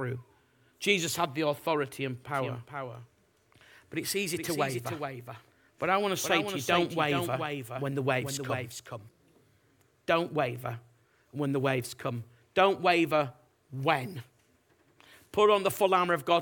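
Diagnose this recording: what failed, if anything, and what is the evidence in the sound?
A doubled audio track runs from 2.29 s, right after "had the authority and", to 9.09 s. A full-band copy of the speech trails by around 400 ms at roughly 5 dB below the original, appearing and vanishing abruptly. A reflection or acoustic echo would decay and carry room colouring. This copy is clean and constant, so the likely cause is the same signal mixed in twice, from a second, slower capture route or a misaligned edit.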